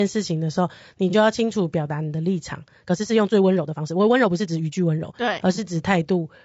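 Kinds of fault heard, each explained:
Low-delay AAC compression: The speech sounds rough and grainy from start to finish. The damage is plainly audible. There is a noisy haze between the voice's harmonics, and the top band sounds thin and synthetic. A low-delay coder uses very short frames, so it separates pitch harmonics poorly and spends bits less efficiently. The sound most likely comes from AAC-ELD, the codec used in video calls. The grain fits a tight budget of around 32 kbps.
AAC frame loss with concealment: Two brief patches break the flow of the speech. The first is at 1.10 to 1.15 s and the second at 5.55 to 5.59 s. Each sounds smeared and noisy, a little phasey, rather than silent. In each case the decoder lost about 30 ms of data, which fits a single dropped frame. It filled the gap by rebuilding the last good spectrum with scrambled detail. The losses are short, so neither fades toward silence.
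Time-stretched section: From 2.81 s to 5.13 s the pace jumps abruptly. The speech runs about 1.48 times faster, yet the pitch stays where it was. To keep the pitch, short pieces of the audio were dropped and the rest spliced together. The section therefore sounds rushed. The cause is likely software squeezing this stretch to fit a shorter length. Normal pace returns after 5.13 s.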